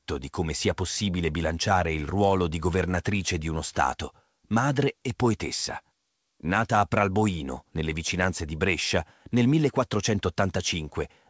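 The speech has no faults.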